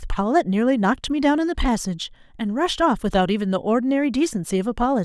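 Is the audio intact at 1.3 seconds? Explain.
Yes, the speech at 1.3 seconds plays through cleanly, with no dropout, click, distortion or other fault at that moment.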